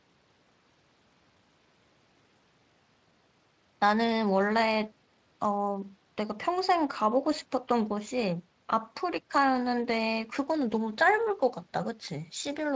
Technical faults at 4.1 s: none

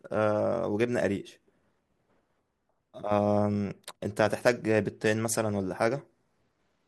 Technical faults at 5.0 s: none

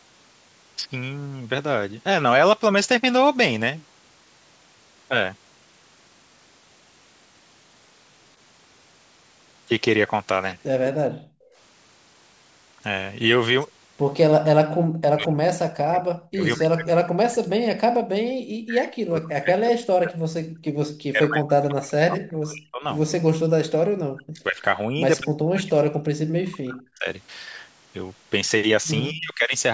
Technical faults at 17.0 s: speech suppressed in double talk

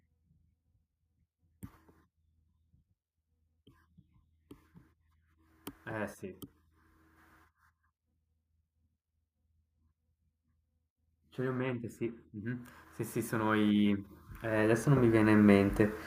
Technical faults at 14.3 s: automatic gain rising

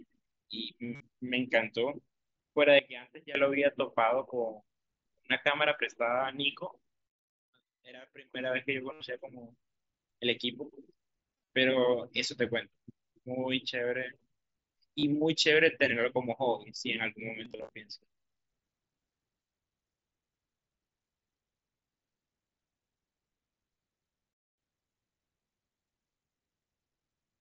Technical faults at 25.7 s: none

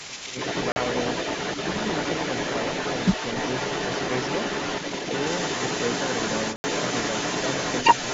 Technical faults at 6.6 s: other side's voice leaking through; block of digital silence

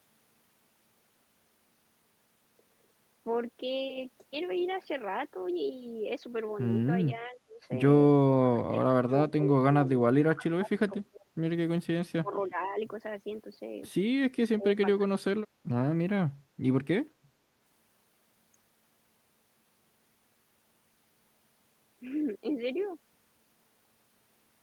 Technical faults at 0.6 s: none

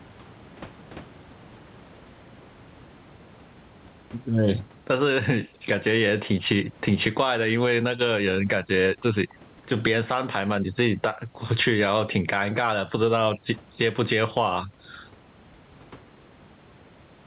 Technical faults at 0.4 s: gain pumping

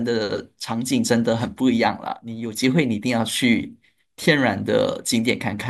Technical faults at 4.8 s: none

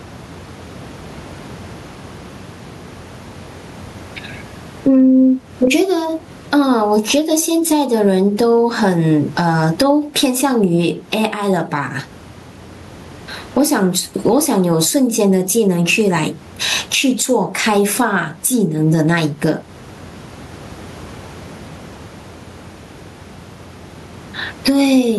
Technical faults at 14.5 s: gain pumping

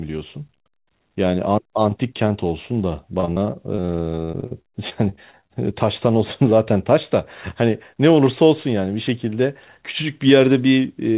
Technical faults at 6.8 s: none

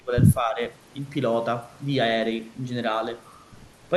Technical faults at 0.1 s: speech suppressed in double talk

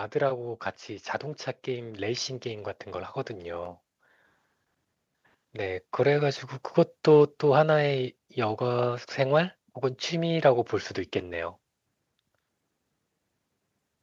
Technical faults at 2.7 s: automatic gain rising

